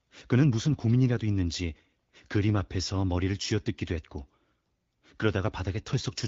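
From 0.70 to 0.77 s the speech turns briefly hoarse and gargly, a scratchy rasp laid over the sound while its pitch and loudness stay roughly in place. These are AMR bit errors. A few percent of the weakly protected bits in the AMR-WB stream, running at 12.65 kbit/s, arrived flipped while the check on the essential bits still passed. The excitation pulses landed in the wrong positions and the fine pitch, gain and spectral values were skewed. The span fits about four 20 ms frames.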